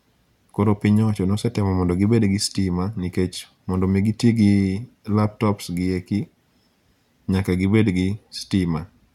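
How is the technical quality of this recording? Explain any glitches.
Nothing stood out on listening to this speech recording, and there are no glitches to explain.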